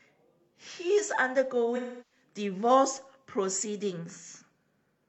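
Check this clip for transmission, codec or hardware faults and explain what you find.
One fault: AAC frame loss with concealment, 1.76 to 2.22 s. The decoder rebuilt missing frames from the last good spectrum, so the speech smears into a phasey, noisy hold that fades toward silence and back. A plain dropout would cut abruptly instead.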